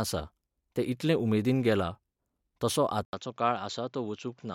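At 3.05 s, after an 80 ms gap, sound turns dull, with nothing above 7.5 kHz, about 5 dB quieter over a faint new noise floor. Band, level and noise shifting together, unlike a plain filter, fit an input likely switched to a poorer device.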